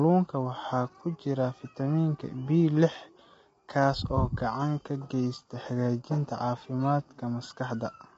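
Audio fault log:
Throughout, low-delay AAC compression: the speech sounds rough and grainy, with noise between the harmonics and nothing above about 7.8 kHz. That likely comes from AAC-ELD at a low bitrate, roughly 24 kbps, where short frames blur pitch harmonics and starve the top band.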